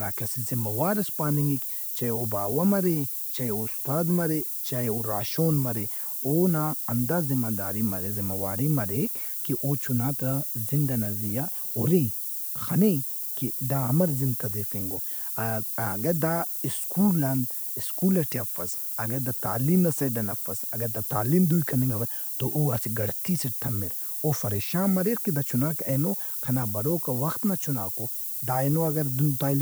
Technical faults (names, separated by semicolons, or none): low bit depth with noise shaping